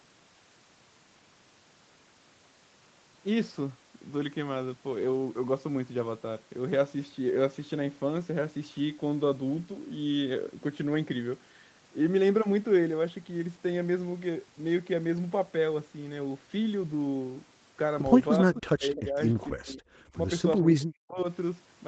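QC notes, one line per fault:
18.42–19.18, 19.34–19.81, 20.6–21.19: speech suppressed in double talk. The voice dips by about 35, 30 and 40 dB, likely because the echo canceller ducked both talkers at once.
18.55–18.59, 18.96–19.03: echo leak. Brief scraps of the voice come back 257 ms late, about 15 then 20 dB down, likely residual loudspeaker echo the canceller missed.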